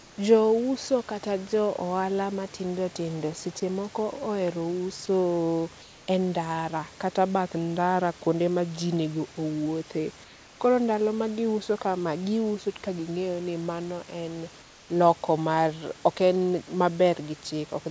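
From 0.00 to 0.18 s the room background, sitting about 25 dB below the loudest speech, turns into a smooth, featureless hiss about 2 dB quieter. This is comfort noise in place of the background, likely because the sender stopped transmitting during the pause and the receiver generated stand-in noise.

At 3.60 to 3.62 s a brief sliver of speech, about 10 ms, gives way to that same flat noise. It is probably sound dropped by the voice detector: speech read as background, and comfort noise played until detection resumed.

The same comfort-noise swap returns at 5.82 to 6.08 s, 10.24 to 10.60 s and 14.62 to 14.90 s, each time about 2 dB down (about 3 dB at 14.6 s), with the live background returning once speech resumes. Throughout, nothing is heard above 8 kHz, consistent with the G.722 call path.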